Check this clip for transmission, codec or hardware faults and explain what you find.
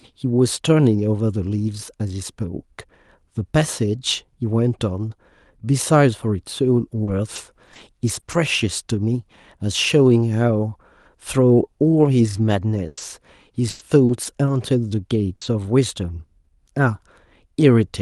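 Yes, there's a real problem: repeated packet loss (robotic sound), in two stretches. From 7.03 to 8.35 s and again from 12.87 to 15.67 s, the sound keeps dropping out. Each hole gets patched by stretching the last bit of audio, so the sound comes out choppy and robotic. Gaps run up to about 40 ms in the first stretch and 100 ms in the second. All of this rides on a call codec path that tops out around 12 kHz.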